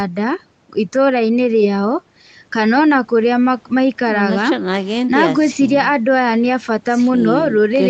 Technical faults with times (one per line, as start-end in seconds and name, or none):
none